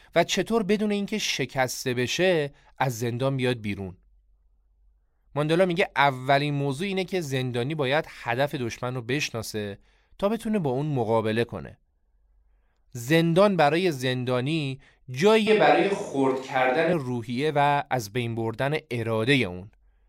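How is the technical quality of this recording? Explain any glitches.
One glitch stands out in this speech recording. From 15.47 to 16.93 s the voice suddenly turns roomy and hollow, losing its low end, then snaps back just as abruptly. The loudness stays about the same, and a faint room noise sits around 40 dB below the speech. This is likely a switch to a distant microphone: for that stretch the close mic's signal dropped out and a farther one, such as a camera mic, filled in, capturing more room reflection and less body.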